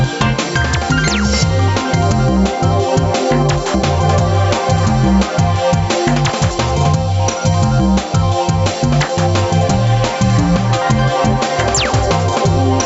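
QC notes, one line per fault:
Throughout, gain pumping: the gain ducks by roughly 5 dB under every loud sound, pulling loud and soft parts closer in level and squashing the sound, likely from input gain set far too high with a fast limiter clamping it.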